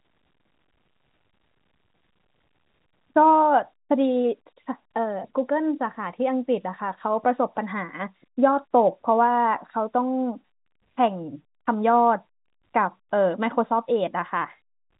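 Nothing stood out on listening to this speech, which comes through the G.711 telephone coding with its usual narrow band that stops just below 4 kHz.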